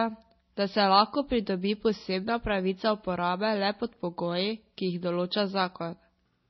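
Throughout the speech, the signal has likely gone through transcoding between lossy codecs: a coarse low-rate encode, fitting 24 kbit/s MP3, then a roughly 96 kbit/s WMA stage. Nothing remains above 5.9 kHz, so it sounds muffled, with the different codec artefacts heard together.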